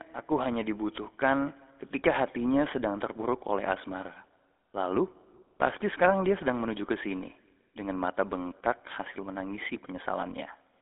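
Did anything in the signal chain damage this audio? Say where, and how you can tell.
Yes. The GSM full-rate codec damaged the audio throughout, at the codec stage. Speech has a plainly audible buzzy, gravelly roughness from its coarse pulse-train excitation, which fits a 13 kbps rate. A spectrogram shows energy confined to about 250 Hz–3.5 kHz, empty above 3.7 kHz.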